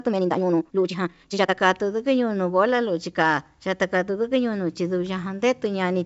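From 0.0 to 1.54 s the speech sounds rushed at 1.93 times normal pace, pitch unchanged: likely a time-stretched section compressed by dropping short fragments.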